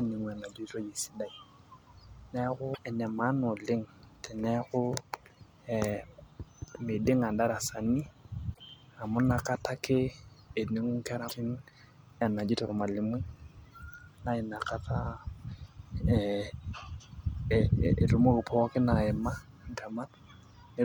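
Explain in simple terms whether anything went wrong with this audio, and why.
Something went wrong with the compressed file itself: small stretches of its data were damaged, so the player couldn't read those pieces and had to skip ahead to the next readable chunk. This is damaged data in a compressed stream. In this speech you hear it as three brief chirps or blips, each under a tenth of a second, at about 2.71 to 2.79 s, 8.50 to 8.59 s, and 11.25 to 11.32 s.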